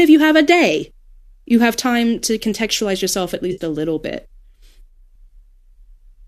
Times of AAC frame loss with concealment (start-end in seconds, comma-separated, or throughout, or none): 3.52-3.61